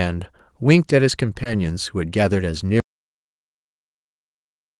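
At 1.43 to 1.47 s the speech has a brief short concealed packet loss. About 20 ms of the call arrived too late for the decoder, which extended the preceding sound to cover the hole and then blended back, leaving a short smear in the speech.

From 2.8 s to the end the speech stops dead in an audio dropout to silence. There is no room tone at all, only silence. The likely cause is an input that was lost while the recorder kept writing, so whatever followed is missing.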